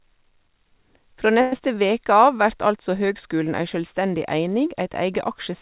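At 1.41 s the incoming packet stream most likely stopped arriving, a long network dropout, and the receiver had to invent the sound until about 1.60 s. For roughly 180 ms the last real sound is carried on as a fading synthetic buzz rather than dropping to silence, and when the audio resumes, about 80 ms of the original is simply gone. The stall also shifts the playout delay by something like 50 ms.

From 1.68 s to 2.38 s, just before "vert altså høgskulen ei", the jitter buffer slow-down follows. The buffer rebuilds its reserve by repeating single pitch periods and slivers of pause over and over. This stretches the passage by about 75 ms, so it plays at roughly 90% speed with unchanged pitch. The sounds come out drawn-out. Throughout, the call-codec band limit at 4 kHz, which fits G.711 A-law at 64 kbps, keeps the top end dull.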